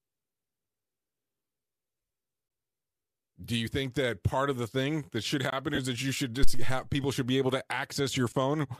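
Between 1.98 and 2.10 s there are lost LE Audio frames: dropouts scattered across 120 ms, about 82 ms missing in total, the longest run roughly 20 ms. The decoder covers each hole by reusing the previous spectrum, so the sound smears into a brief noisy wash. The light LC3 coding heard throughout is likely what carries the stream.

A gap between chunks follows at 2.48 to 2.50 s, a silent hole of about 21 ms where one 3 s block ends and the next starts. The same gap comes back at 5.50 to 5.52 s, right after "the thing that should".

More lost frames hit at 5.75 to 5.79 s (30 ms of concealed, noisy smear).

Between "that you should" and "people should be able", from 6.43 to 6.86 s, there's a phantom power thump. A supply switching on or off at the live input pushes a step through the coupling capacitors, giving a deep low thud that dies away in roughly 100 ms.

Lost frames come again at 8.30 to 8.32 s (about 22 ms) just after "should be able to".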